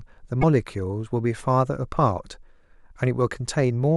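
At 0.38 s there's a short burst of damaged data in the compressed stream, lasting to about 0.44 s. Corrupted bytes threw the decoder off, so it misread those frames and lost sync until it found a clean header, leaving a quick glitch in the speech.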